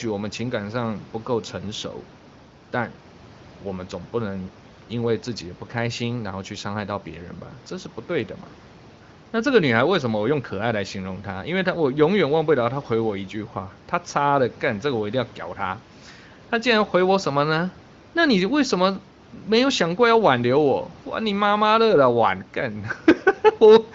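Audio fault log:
No faults to log for this audio.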